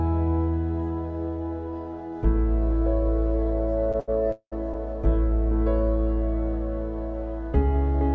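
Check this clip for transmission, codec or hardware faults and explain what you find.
Three network timing faults occur close together, two short stalls and one freeze, all heard over a G.722-style call path with nothing above 8 kHz.

Short stalls from late packets, 3.92 to 3.96 s and 4.00 to 4.10 s: the jitter buffer ran dry, so the last sound was stretched by 18 ms and 78 ms. Nothing drops out; each sound just hangs slightly too long with a faint buzz or dip.

Call audio freeze, 4.32 to 4.54 s: the likely cause is packets held up in transit. The receiver filled 201 ms, fading into about 80 ms of silence before resuming. Unlike the stalls, it leaves an audible gap rather than a brief smear.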